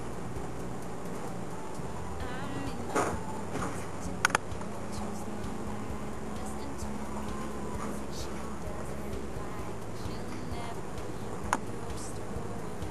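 Nothing in this one trips any alarms, with no dropouts, glitches or distortion turning up anywhere along the way.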